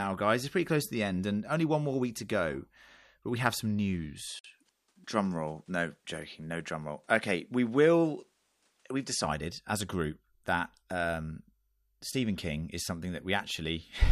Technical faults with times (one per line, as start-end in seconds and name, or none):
4.29-9.24 input switched to a poorer device
4.39-4.45 digital broadcast dropout